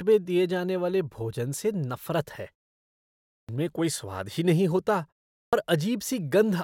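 Speech whose onsets at 3.39 s and 5.43 s (after "नहीे होता है") lose about 0.1 s: a clipped start after a pause, where the output sleeps in silence and wakes late.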